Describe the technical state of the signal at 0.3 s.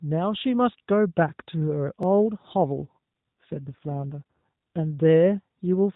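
At 0.3 s the speech is intact, with no fault there beyond the narrowband band limit of the AMR narrowband mobile codec it passes through.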